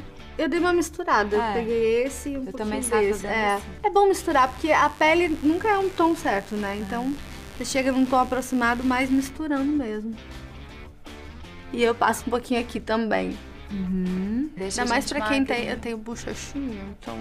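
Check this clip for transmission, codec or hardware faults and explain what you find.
One hardware fault is present: mains buzz from 4.30 to 9.30 s. Switching spikes from 50 Hz power add a raspy hum well below the signal, visible as evenly stacked horizontal harmonic lines on a spectrogram.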